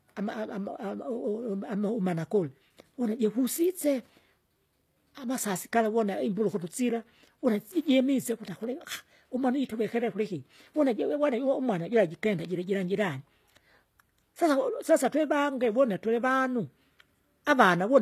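HE-AAC compression runs throughout the speech and is plainly audible from start to finish. The s sounds come across gritty and metallic, and nothing is left above about 14.9 kHz. This fits a low bitrate of around 24 kbps, and the likely cause is spectral band replication. The codec keeps only the lower band intact and then synthesises the treble by copying lower content upward under a coarse envelope, so the upper harmonics no longer line up with the real ones.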